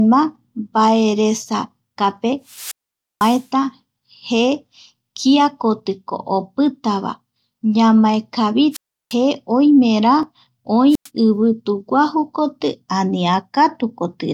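From 2.47 to 3.47 s the speech has a wireless microphone squelch dropout. The FM link fades, hiss swells briefly, and then the receiver's squelch cuts the output to near silence for about 0.50 s before the voice comes back. The same thing happens from 8.71 to 9.15 s, with a 0.35 s mute.

At 10.23 s there is a slight jump ahead in the sound, where a few milliseconds are missing. This is likely a dropped buffer (overrun): the hardware overwrote samples before the software read them, so the two sides are spliced together with no gap.

A shorter squelch dropout runs from 10.89 to 11.09 s and mutes for about 0.10 s.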